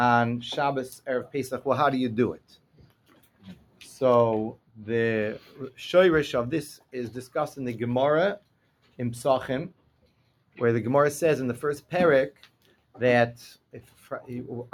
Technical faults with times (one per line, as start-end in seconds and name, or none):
0.00-14.73 noise suppressor applied to music or sounds
2.37-3.81 sound cut by the noise suppressor
5.39-5.58 sound cut by the noise suppressor
8.39-8.99 sound cut by the noise suppressor
9.72-10.57 sound cut by the noise suppressor
12.32-12.95 sound cut by the noise suppressor
13.73-14.08 sound cut by the noise suppressor